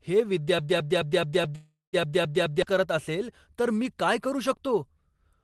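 From 0.59 s to 2.62 s the speech sticks on a fragment of about 0.21 s that plays eight times back to back, a broken-record loop; the likely cause is a stalled stream resending its last buffered piece, so the audio meant for that stretch never arrives.

Within that stretch, from 1.55 s to 1.96 s, the sound smears into a fading buzz or hiss, with about 160 ms of near-silence. This is a call audio freeze: delayed packets probably emptied the jitter buffer, which filled roughly 375 ms before playback resumed where it stopped, losing nothing. The call path's upper limit near 12 kHz fits Opus at about 24 kbps.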